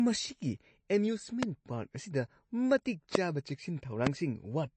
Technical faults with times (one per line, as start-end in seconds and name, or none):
0.00-4.76 MP3 compression
1.43-1.45 loud pop
3.15-3.17 loud pop
4.07-4.09 loud pop